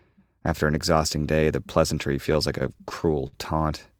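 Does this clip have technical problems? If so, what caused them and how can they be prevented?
Yes. Repeated stalls (stutter) occur from 2.33 to 3.35 s. Packets arrived late, so the jitter buffer emptied eight times, and the receiver stretched the last sound to fill about 135 ms, with the longest gap 58 ms. On a spectrogram these show as smeared, repeated frames. A larger adaptive jitter buffer prevents this.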